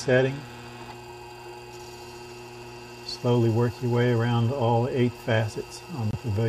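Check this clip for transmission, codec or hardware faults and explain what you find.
There's one fault, right near the end. From 6.11 to 6.15 s the sound cuts out briefly, a clean hole of about 40 ms, and then picks up further along as if it had kept playing. That's a Bluetooth dropout, likely caused by a single lost frame of roughly 23 ms that never reached the headphones in time.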